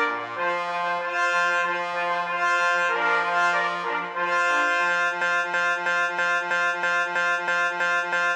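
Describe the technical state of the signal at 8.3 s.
At 8.3 s the signal is inside a broken-record loop running from 5.21 s to the end: a 0.32 s fragment repeats exactly, ten times back to back, likely from a stalled player or stream resending its last buffer. Unlike an echo, each copy is identical and undecayed.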